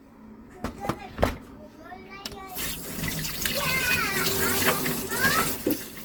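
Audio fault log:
Throughout: generation loss. Swirly, smeared, hollow texture with blurred attacks, though content reaches 20.2 kHz, more damage than one pass at what sounds like 48 kbit/s Opus would cause. Likely about five encodes, each requantising on a shifted frame grid so noise accumulates.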